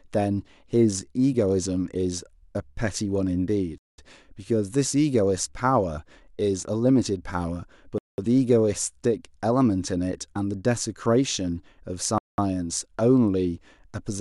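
Three short, hard-edged holes cut into the speech at 3.78 to 3.98 s, 7.98 to 8.18 s and 12.18 to 12.38 s, each a clean 200 ms of silence. This is a gap between chunks: the audio was delivered in 4-second blocks, with dead air left at each join. Nothing is lost, but the flow of speech stops abruptly at each boundary and then resumes.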